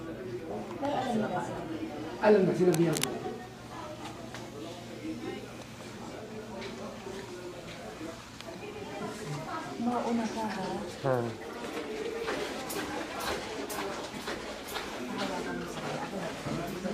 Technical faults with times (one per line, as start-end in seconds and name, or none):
2.69-3.04 cable scratch noise